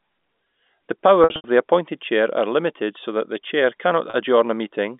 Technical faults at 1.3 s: packet loss with pitch repetition

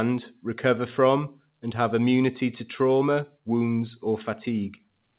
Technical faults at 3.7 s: none

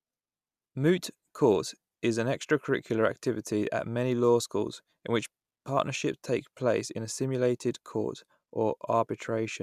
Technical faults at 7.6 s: none

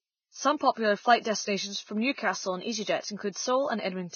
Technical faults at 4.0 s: Vorbis compression

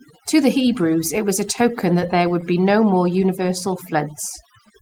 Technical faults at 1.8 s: overdone noise removal; scattered short gaps

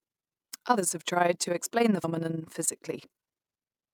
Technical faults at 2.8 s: overlap-add ripple

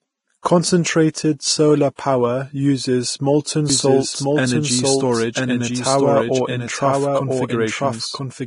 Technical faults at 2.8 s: Vorbis compression

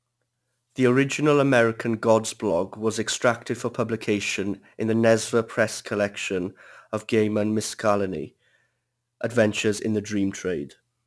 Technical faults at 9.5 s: aliasing

